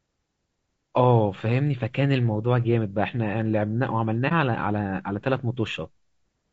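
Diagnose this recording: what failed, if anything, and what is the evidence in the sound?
At the codec stage, the speech is rough and grainy from start to finish, with plainly audible damage. The likely cause is low-delay AAC compression, AAC-ELD, at a rate that fits about 32 kbps. Its short frames resolve pitch harmonics poorly. On a spectrogram the harmonic stripes look smeared, with noise filling the gaps between them, and the top band looks thinned or artificial.

A second fault, AAC frame loss with muting, sits in the transport path between the network and the decoder, at 4.28 to 4.32 s. The decoder zeroed the spectrum for the missing data, which fits one lost frame of about 30 ms. The overlapping windows turn this into a soft-edged gap. The waveform tapers into a brief near-silent dip and back out, and the spectrogram shows a narrow blank vertical band with blurred edges.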